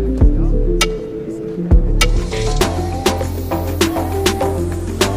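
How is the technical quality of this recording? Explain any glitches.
Nothing here needs explaining: there are no glitches to point to, and the recording holds together without any audible technical trouble.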